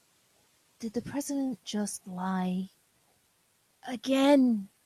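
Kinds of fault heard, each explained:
No faults of any kind can be heard here.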